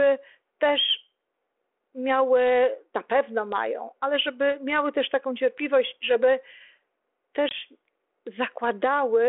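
Speech over a 32 kbit/s G.726 ADPCM telephone line drops into a hard-edged silent gap of about 20 ms at 7.49 s, then returns slightly distorted until 7.54 s. This is packet loss on an ADPCM call: a couple of packets vanished, and the decoder's adaptive predictor and step size lost sync with the sender's until they re-converged.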